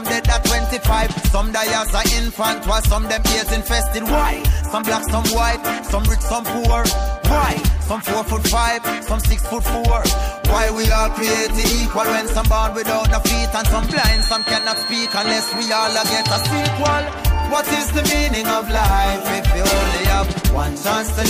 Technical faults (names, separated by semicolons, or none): feedback whistle